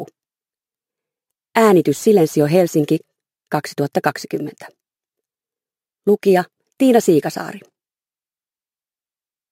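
A gritty, inharmonic fizz runs through the whole clip, riding on the louder and brighter moments. This is crude rate conversion: samples were repeated rather than filtered, which fits a 32 kHz to 44.1 kHz change, leaving error roughly 25 dB down. Unlike clipping, the added tones aren't harmonics.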